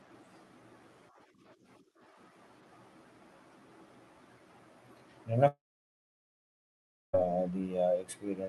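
At 5.47 s the speech breaks off, and nothing new arrives until 7.15 s. This long network dropout is likely the cause. The last sound smears into a short, fading buzz. About 1.5 s of near silence follows. Speech returns with roughly 1.66 s missing. Throughout, the call codec's top end stops near 12 kHz.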